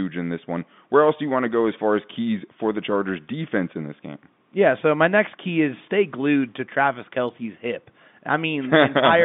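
No audible faults occur anywhere in this speech recording.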